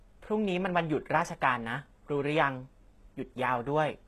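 A speech recording that has likely passed through HE-AAC compression at a very low bitrate, with the sound pointing to something around 16 kbps. The codec keeps only the lower spectrum properly and fakes the treble by copying lower bands upward under a coarse envelope, so the top end sounds bright but synthetic, with nothing above about 12.3 kHz. Throughout the clip, s sounds turn gritty and lispy, and the damage is plainly audible.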